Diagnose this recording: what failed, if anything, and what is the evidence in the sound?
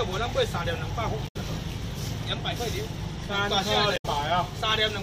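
Two short disruptions break into the audio, one from 1.24 to 1.36 s and another from 3.93 to 4.06 s, each about 0.12 s long. The failure is at the codec stage: damaged data in a compressed stream. Corrupted bytes made the decoder misread those frames and lose sync. It produced garbage until it found the next valid frame header and resumed clean decoding.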